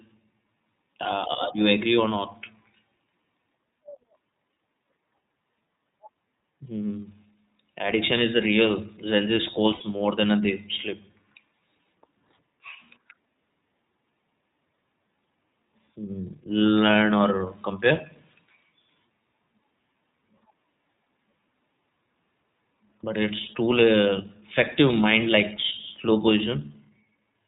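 Throughout, the speech carries the iLBC codec's narrowband sound: nothing passes above 4 kHz, so sibilants lose their edge, and the voice has a plainly audible rough, slightly synthetic grain. The codec codes each frame's excitation on its own, and the texture points to its 30 ms mode at about 13.33 kbps. Unlike a generic low-pass filter, the roughness sits inside the voice itself rather than only dulling the top end.

From 9.74 to 9.83 s, just before "more than they sleep", come lost iLBC frames. The gap fits two missing 30 ms frames, and the decoder fills it by repeating the last pitch cycle mixed with noise, so the sound becomes a held, faintly buzzy vowel instead of dropping to silence. What sets it apart from concealment in codecs that chain frames together is the recovery: because iLBC frames stand alone, the voice is right again almost immediately afterward.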